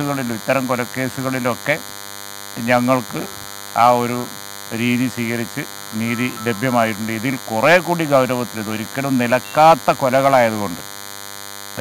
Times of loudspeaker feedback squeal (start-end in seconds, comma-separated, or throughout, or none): none